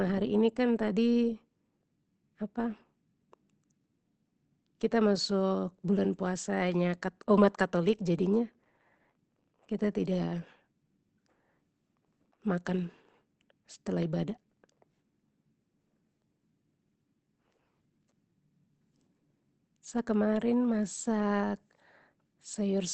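From start to finish the speech sounds muffled and hoarse, with nothing above 8.7 kHz, pointing to Opus compression, likely in its SILK speech mode at a rate near 16 kbps.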